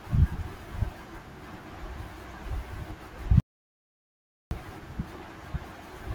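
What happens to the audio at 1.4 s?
Nothing goes wrong at 1.4 s; the speech carries straight through that moment without any dropout, click, glitch or other audible fault.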